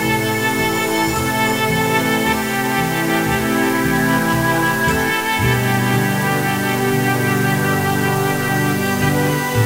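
Low bit depth with dither runs from start to finish, laying a constant, even hiss under the sound. The audio behaves as if it had been reduced to about 5 bits, with a small random signal added before each sample was rounded to one of the few levels available. That dither turns what would have been gritty, signal-dependent distortion into steady white noise, which here sits only roughly 15 dB below the sound, loud enough to stay obvious throughout.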